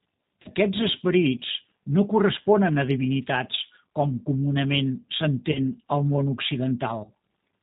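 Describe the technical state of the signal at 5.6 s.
Right around there you're hearing VoIP packet loss concealed by the speech codec, running from about 5.52 to 5.59 s, between "a divinitats com comunament" and "al món". Roughly 30 ms of audio went missing, which fits a single lost packet. The decoder filled the gap by stretching its last pitch and vocal-tract settings while turning the gain down, so you get a short fading smear of stretched sound. Because each frame leans on the previous one, the voice stays weak or distorted as it comes back.

Underneath that is the G.729 codec, which is present across the whole clip. It rebuilds speech from a vocal-tract filter, a pitch predictor and a few pulses per frame, and the rate sounds like about 8 kbit/s. Nothing above 4 kHz gets through, so the sound is muffled and band-limited, and it has a plainly audible rough, synthetic edge.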